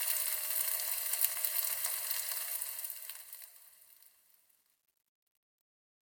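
Truncation distortion on the fade runs from 2.41 s to the end at 6.02 s. The fade-out that begins around two and a half seconds passes through a gain stage that rounds the samples to a coarse grid with no dither, which fits a stage keeping only about 11 bits. As the level falls, the waveform collapses into a few square steps. From 3.02 s onward the tail turns gritty.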